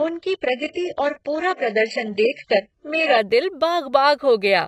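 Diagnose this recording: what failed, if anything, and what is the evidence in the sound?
Adaptive stream starting at a low bitrate, a network fault. Until 3.18 s nothing exceeds 8 kHz and artefacts are heavy. Quality then jumps, without a gap.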